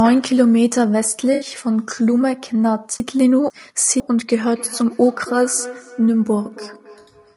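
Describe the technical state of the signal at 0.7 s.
At 0.7 s the speech carries plainly audible low-delay AAC compression, present throughout the clip. It's likely AAC-ELD at a rate that fits about 32 kbps. At that low bitrate its coarse coding lets noise fill in between the voice's harmonics, so the sound comes out rough and grainy.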